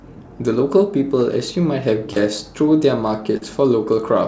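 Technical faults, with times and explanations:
2.13 to 2.17 s and 3.37 to 3.42 s, short concealed packet loss: roughly 40 ms of the call arrives too late each time, so the receiver stretches the preceding sound to fill the gap and then blends back. You hear a quick smear or wobble, against a band that stops at 8 kHz, which fits G.722.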